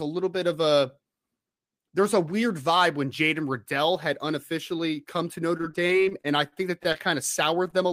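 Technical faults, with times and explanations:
5.57–6.96 s, repeated packet loss (robotic sound): The audio turns choppy as around a dozen short holes open in quick succession. Each is bridged by extending the preceding sound, the longest gap being about 41 ms, so roughly a sixth of this stretch is patched-in audio and about 120 ms of real material is gone. Unlike a single late-packet stall, the gaps keep recurring and genuine content goes missing, which produces the robotic texture.
6.6–7.16 s, jitter buffer speed-up: Overlapping the end of the choppy stretch, the audio runs about 5% fast while its pitch stays put, giving a slightly hurried feel. The receiver had built up more buffered audio than it wanted after the delayed packets came in, so it trimmed a few tens of milliseconds by cutting out tiny pitch-period-sized slices. That is what separates it from playback-speed errors, where pitch would rise along with tempo.
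7.70–7.84 s, short stall from a late packet: Near the end, one sound is held slightly too long, about 19 ms of stretched material with a slight buzz or dip. The packet arrived late, the buffer briefly ran dry, and the receiver prolonged the last sound until it came, then resumed from the same point. Nothing is lost, unlike the repeated loss earlier. The brief hesitation is a single hold rather than a run of gaps.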